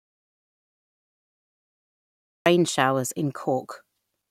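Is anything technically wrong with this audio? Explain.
Yes. An audio dropout to silence runs from the start to 2.46 s, dead silence with no room tone, likely a lost input, before the speech returns on "showers in".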